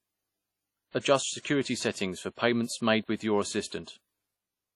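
WMA compression runs throughout the speech: heavy transform-codec damage with nothing above 13.3 kHz. The hiss swells and fades with the speech and sounds ringing and washy, as when weak spectral lines are zeroed, which fits a low bitrate near 32 kbps and likely comes from WMA encoding.

Pre-echo appears from 3.67 to 3.72 s, where a sharp attack lands late in a long block. Quantisation noise sized for the loud onset is spread across the block, so a short hiss leads the attack by about 47 ms and blurs its edge.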